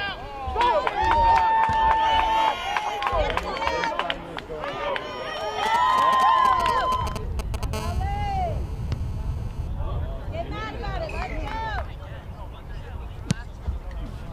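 From 5.66 to 7.65 s you get GSM signalling bursts: a 2G handset close by is sending short clusters of radio pulses, the kind it sends while setting up a call or a text, and something in the audio chain is rectifying them. What comes through is that galloping dit-dit-dit of brief 217 Hz buzzes, sitting fairly loud, only a little under the wanted sound.

Right after, from 7.73 to 9.68 s, it turns into GSM phone buzz: the phone is now in an actual call and transmitting its bursts continuously at about 217 Hz, so the rectified pulses form a steady, harsh, raspy buzz full of harmonics that has nothing to do with the program material. It's quieter than the signalling bursts, about 18 dB below the sound.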